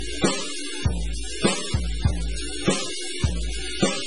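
From the first moment to the end of this music there's a grit riding on everything, and it thickens wherever the level drops, with quiet stretches filling up with noise instead of going clean. That's the signature of a stuck bit, likely one data line jammed at 0 or 1 in a converter or cable. Roughly half the samples land off by that bit's weight, in a pattern that follows the waveform, so the distortion tracks the music rather than sitting steady underneath it.

Running alongside that for the whole clip is heavy MP3 compression. Nothing comes through above about 10.5 kHz, so the top end stops dead and everything sounds dull and boxed-in. The rest has that watery, swirling texture you get when weak frequency lines blink in and out between frames, with metallic chirping on the bright parts and attacks smeared soft. The damage is severe enough that it likely comes from a very starved encode, which fits a bitrate somewhere around 16 kbps.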